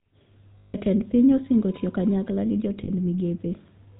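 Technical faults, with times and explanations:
Throughout: GSM full-rate codec. The speech has a buzzy, gravelly roughness because the vocal tract is modelled and driven by sparse, regularly spaced pulses at about 13 kbps. On a spectrogram nothing appears above 4 kHz, and harmonics look smeared and coarse.
0.58–0.75 s and 2.84–2.89 s: lost GSM frames. Before "piny osingo tiyo kanyakla", and after "osingo tiyo kanyakla gi", the last good frame is repeated, giving a rough metallic ring. The spectrogram shows frozen bands, lasting about 160 ms and 40 ms.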